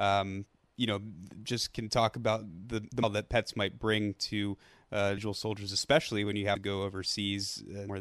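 At 3.02 s the speech jumps straight from "talk about the the" to "that pets might bring", with something like 0.4 s of audio gone. These are compressed frames skipped. Whole blocks never reach the decoder's output, so playback leaps forward by a multiple of the frame length, which fits frames of about 26 ms. Because the frames overlap, each join sounds like a soft smeared blip, not a click. Shorter jumps follow at 6.55 s (roughly 150 ms) and 7.88 s (around 300 ms).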